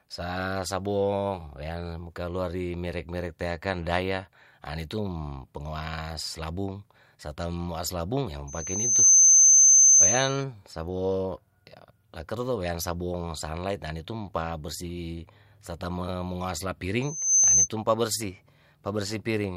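A piercing 6.2 kHz whistle swells over roughly half a second at 8.47 s, howling until 10.44 s, then briefly returns from 17.02 to 17.69 s: loudspeaker feedback squeal, the microphone re-amplifying its own loudspeaker.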